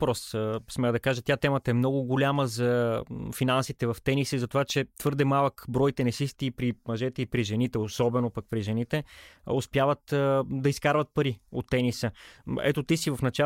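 From 4.70 to 5.44 s, five short ticks land at an even spacing of roughly six or seven per second. These are CD scratch ticks: a blemish on the disc corrupts more data than error correction can rebuild, so the player patches or mutes a brief run of samples each time that spot passes the laser. Each tick lasts only a millisecond or so. The steady, rotation-locked rhythm separates them from the random crackle of vinyl dust or from isolated digital glitches.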